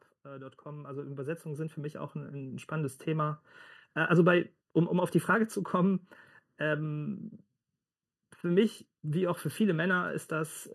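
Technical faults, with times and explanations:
Throughout: channel delay (comb filtering). One channel lags the other by just under a millisecond, and summing them to mono cancels shared content at regularly spaced frequencies, starting around 700 Hz and repeating about every 1.4 kHz. The speech sounds hollow and phasey.
0.22–3.34 s: automatic gain rising. The gain control judged the input too quiet and raised its level gradually by about 14 dB over roughly three seconds, so the speech and background noise swell together rather than holding a steady level.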